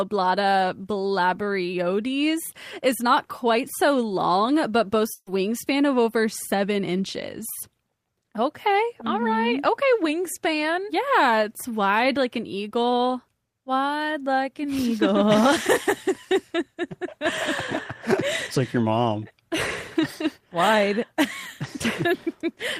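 A burst of packet loss at 5.13 to 5.29 s removes about 140 ms of audio. The receiver extends the last sound and fades it out before playback resumes further along.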